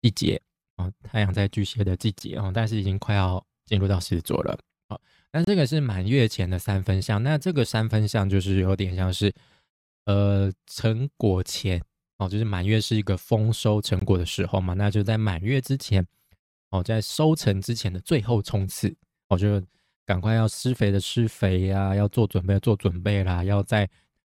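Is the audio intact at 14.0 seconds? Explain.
No. A gap at a join of encoded pieces breaks the speech from 13.99 to 14.02 s: about 21 ms of untrimmed encoder delay and padding, heard as a short dropout with smeared edges.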